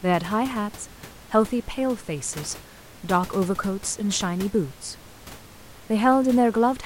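Nothing stood out on listening to this speech recording, with the room's own background noise sitting about 20 dB below the speech.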